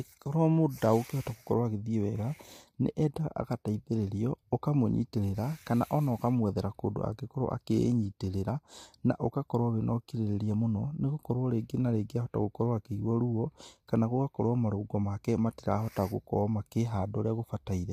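Speech, with low-delay AAC compression audible from start to finish. The voice sounds rough and grainy. Noise fills the gaps between the pitch harmonics, and the top band has a dulled, synthetic quality. The likely cause is AAC-ELD, the low-delay codec used in video calls. Its short frames, about 10 ms long, cannot separate closely spaced harmonics well, and they spend more bits doing it. The plainly audible damage fits a bitrate around 32 kbps.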